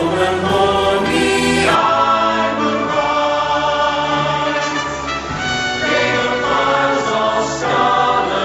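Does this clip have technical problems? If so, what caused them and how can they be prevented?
Yes. From 1.75 s onward the sound turns duller, with nothing above 7.6 kHz. Level stays steady. This is likely an input switched to a poorer, narrower-band device. Lock the input device before recording.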